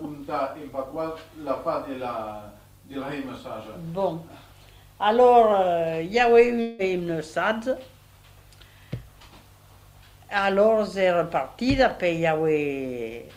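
From 6.61 to 6.82 s the last sound stretches into a fading buzz, then resumes with 0.18 s gone, likely a long network dropout.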